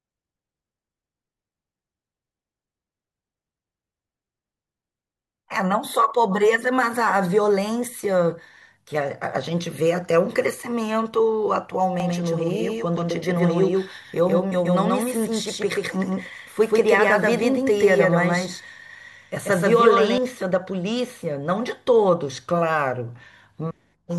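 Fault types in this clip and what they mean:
Doubled audio track: From 12.0 s to 20.2 s the speech is joined by a second, full-band copy trailing around 150 ms behind and at roughly the same loudness. Every syllable gets a hard slapback with no decaying tail or room colour, and the copy cuts in and drops out abruptly at those points. The likely cause is the same signal being captured twice, once through a slower path, and summed into the mix.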